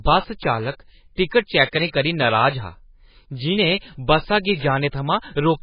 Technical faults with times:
0.00-5.63 MP3 compression

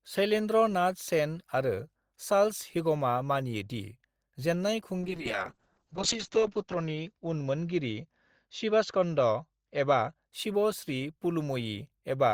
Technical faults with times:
5.03-10.35 call bitrate drop

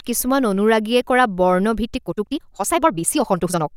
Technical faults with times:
1.79-3.77 time-stretched section

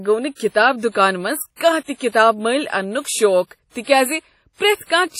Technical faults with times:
0.00-5.20 WMA compression

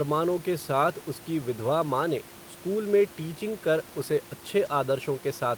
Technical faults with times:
4.65 lost packet rebuilt from error correction

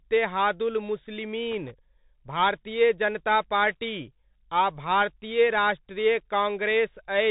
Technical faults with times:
0.00-7.30 Bluetooth CVSD headset codec
1.51-1.71 loose connector crackle

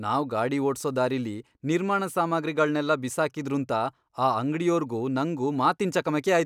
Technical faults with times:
none

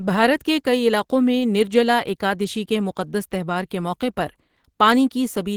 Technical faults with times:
0.00-5.56 Opus compression

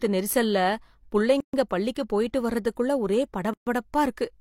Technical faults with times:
1.40-1.53 gap at a join of encoded pieces
3.53-3.67 gap at a join of encoded pieces

